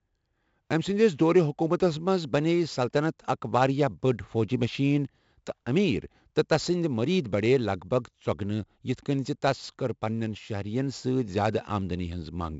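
4-bit ADPCM compression runs through the whole speech clip. Each sample is coded as a coarse 4-bit step from a prediction, so gritty hiss rides on every loud syllable and sharp onsets distort. Nothing sounds above about 7.7 kHz, which fits a 16 kHz sample rate.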